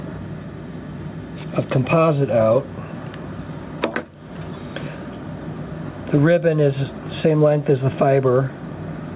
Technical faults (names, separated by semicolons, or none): gain pumping